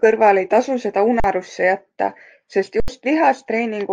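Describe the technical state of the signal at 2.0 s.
At 2.0 s the speech signal is intact, with no audible fault at that moment.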